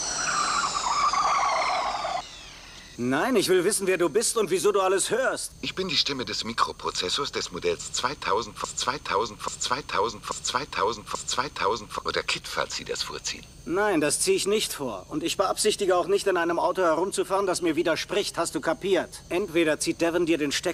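From 8.64 to 11.99 s, a broken-record loop repeats one 0.84 s fragment four times back to back, likely a stalled player or stream; the intended audio there is lost.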